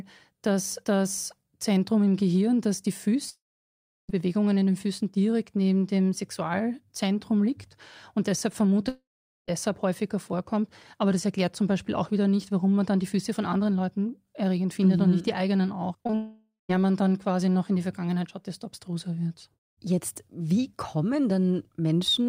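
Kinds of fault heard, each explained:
Long network dropout: Three times the speech stops and gives way to a fading buzz or hiss, then silence, likely because no packets arrived. After "das die" at 3.29 s about 0.8 s is lost. At 8.89 s it is about 0.6 s. At 16.15 s it is about 0.54 s, with only a brief silence.
Short concealed packet loss: Just after "nicht die eigenen auch", three quick gaps of about 20 ms fall at 16.04, 16.07 and 16.11 s. The receiver patched each by extending the preceding sound. This gives a short smeared wobble that runs straight into the next dropout.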